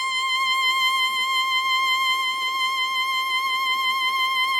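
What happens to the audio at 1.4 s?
Nothing goes wrong at 1.4 s: the music plays straight through that moment with no dropout, click, glitch or other audible fault.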